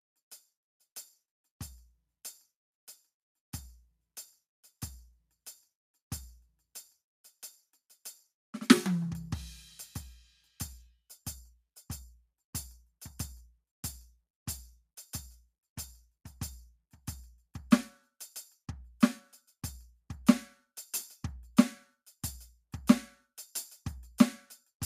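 No technical faults can be heard anywhere in this music clip. Nothing in the sound points to a problem in how it was captured, processed or delivered.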